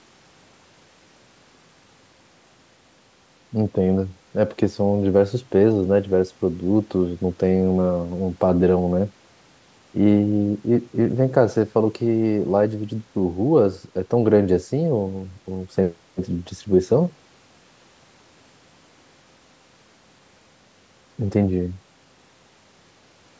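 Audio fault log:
No faults detected.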